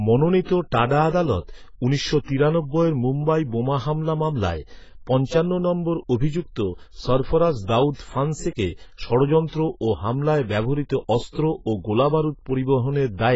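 Speech with heavy AAC compression damage throughout: nothing above 7.7 kHz, a dull, smeared sound and fizzy sibilants, likely AAC-LC at around 16 kbps.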